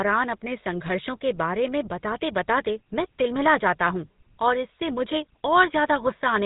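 Throughout the speech, the GSM full-rate codec damage is plainly audible, consistent with a 13 kbps stream. The codec rebuilds the voice from a vocal-tract model driven by sparse, regularly spaced pulses, producing a buzzy, gravelly roughness, and nothing passes above 3.8 kHz.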